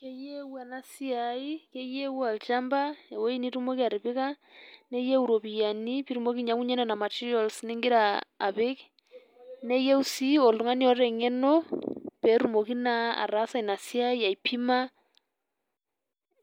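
No technical faults can be heard anywhere in this speech recording. Nothing breaks into the sound at any point, so there are no events to place in time.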